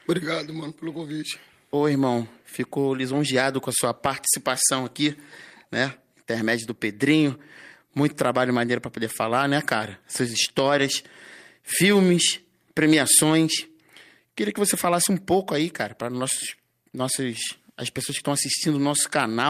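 Nothing in the recording stood out as a technical problem on listening.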